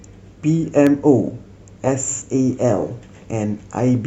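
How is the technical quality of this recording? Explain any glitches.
One glitch stands out. Electrical switching spike at 0.87 s: a single sharp snap, peaking around -10 dBFS, laid over the speech, likely from a nearby switch or discharge arcing into the audio line.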